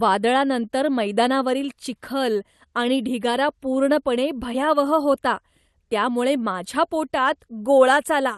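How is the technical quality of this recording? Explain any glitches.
No glitches turn up in the recording: the speech arrives intact and continuous, with only the ordinary coding texture and a top end that stops near 12 kHz, as expected from a normally working call path, consistent with Opus at about 32 kbps.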